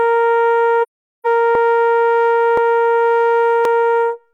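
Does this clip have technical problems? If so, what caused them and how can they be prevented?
Yes. From 0.82 to 1.27 s the music fades into a soft-edged silence about 0.43 s long, which fits ten AAC frames lost and muted by the decoder. Protecting the stream with retransmission or error correction would prevent this AAC frame loss with muting.

At 1.55, 2.57 and 3.65 s the music jumps ahead by a few milliseconds with no gap, likely a dropped buffer (overrun). Larger buffers or a higher-priority audio thread would prevent this.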